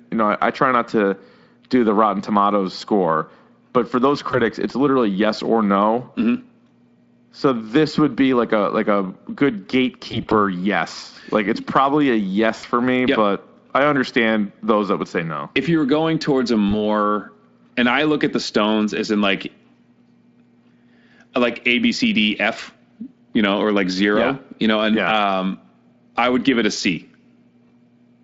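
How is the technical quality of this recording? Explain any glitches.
The recording carries VoIP packet loss concealed by the speech codec, in four short dropouts over light Speex coding. At each one the decoder guessed the missing audio from its last pitch and filter. The sound briefly smears into a fading buzzy tone or coloured noise before recovering.

At 4.31 to 4.39 s, between "score but for those" and "it's literally yes or", a gap of about 20 ms blurs the sound.

At 10.11 to 10.34 s, after "a like a good", short losses scattered over 200 ms leave the sound weakened.

At 12.57 to 12.65 s, a 60 ms gap is filled with a fading, stretched sound.

At 16.69 to 16.72 s, after "were going towards a", a 20 ms gap causes a brief smear.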